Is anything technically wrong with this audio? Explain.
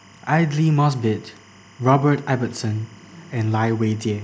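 Yes, there's timecode bleed running under the speech for the whole clip. It's a steady chirpy warble sitting around 30 dB below the speech. Linear timecode from a neighbouring track or cable has leaked into the audio path. That code is a square wave flipping between tones near 1 kHz and 2 kHz, and the rhythm here fits 25 fps code.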